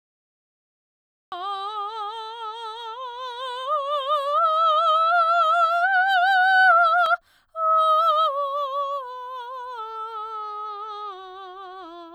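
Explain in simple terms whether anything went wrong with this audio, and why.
The recording started late, a fault called a cut-off start. The music was already playing when capture began, so the first 1.32 seconds are dead silence, then the music jumps in mid-sound, with no natural beginning or fade-in.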